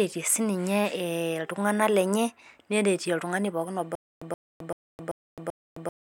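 At 3.95 s, right after "neretie oltungani pookin oba", a stutter with silent gaps begins and runs to the end. A 125 ms fragment repeats five times, each followed by 263 ms of dead silence, every 387 ms. The likely cause is a stalled stream replaying its last buffer. Unlike simple dropouts, the same snippet returns at a steady pace, and the speech that should follow is lost.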